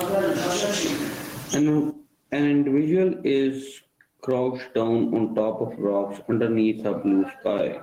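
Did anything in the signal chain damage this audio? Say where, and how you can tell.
Yes. Gain pumping runs through the whole clip, most likely from input gain set far too high with a fast limiter or compressor clamping it. The gain swings by around 10 dB, pulling down on each loud part of the speech and squashing the dynamics.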